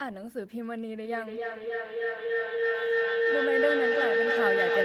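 Speech with a feedback howl from 1.04 s to the end, peaking about 5 dB above the voice near 500 Hz and pulsing roughly every 300 ms. Unlike echo, the repeats grow rather than fade.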